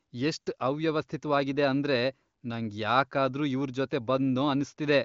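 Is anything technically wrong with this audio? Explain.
No, nothing in this speech clip is technically wrong. The audio has the band-limited sound of AMR wideband (HD Voice) coding, with nothing above about 7.5 kHz and the clarity that fits its high rate, around 23 kbit/s.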